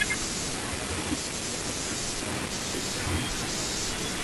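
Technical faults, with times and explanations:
2.31 to 4.23 s, imaging from sample-and-hold upsampling: from this point to the end, the speech picks up a bright, metallic fizz that rises and falls with the speech level. The rate appears to have been doubled by repeating each sample with no smoothing filter, which fits a step from 24 kHz to 48 kHz. That leaves a mirrored copy of the spectrum from 12 kHz to 24 kHz, about 11 dB below the signal, moving opposite to the pitch.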